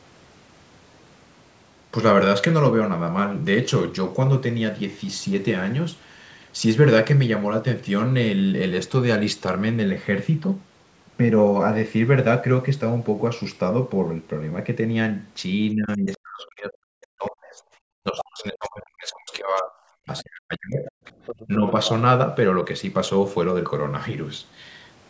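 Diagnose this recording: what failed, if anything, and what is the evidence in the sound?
The failure is in the call processing stage, specifically the echo canceller, and shows up as speech suppressed in double talk. The talker's level collapses, by about 40 dB at its deepest, from 15.73 to 17.6 s, 18.01 to 19.74 s and 20.05 to 20.89 s, with a shallower dip of about 10 dB at 21.47 to 21.74 s. The likely cause is the canceller treating the overlap as echo: unable to tell near speech from loudspeaker return, it attenuated both.

The same canceller also leaves the other side's voice leaking through. Short fragments sit at 18.19 to 18.24 s (about 10 dB below the speech), 19.57 to 19.61 s (about 30 dB below) and 20.18 to 20.23 s (about 25 dB below). A longer stretch runs from 20.85 to 21.89 s at about 15 dB below. This is likely residual loudspeaker echo that the adaptive filter failed to subtract. 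The band-limited character, with nothing above 8 kHz, matches the normal microphone path.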